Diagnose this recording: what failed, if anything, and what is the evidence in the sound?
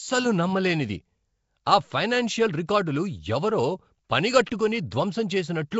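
Nellymoser compression throughout, codec stage: rough, hissy, smeared speech with nothing above 7.7 kHz, likely from coarse fixed-rate blocks whose empty bands are noise-filled.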